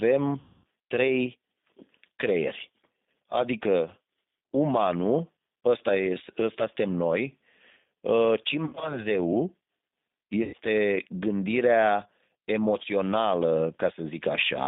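Throughout, the speech carries G.729 codec damage: the band stops near 200 Hz and 3.7 kHz, and the voice is rough and faintly synthetic, consistent with an 8 kbit/s G.729A coder rebuilding each frame from a filter and a few pulses. Unlike plain telephone band-limiting, the roughness is built into the voice itself.

From 0.40 to 0.65 s, VoIP packet loss concealed by the speech codec stretches about 240 ms of lost audio into a fading buzzy tone or coloured noise. Shorter concealments follow at 8.65 to 9.04 s, where 100 ms of loss in short runs produces repeated brief smears, and at 10.43 to 10.56 s. The voice stays weak for a moment afterwards. This separates concealment from a dropout, which would leave silence or a click.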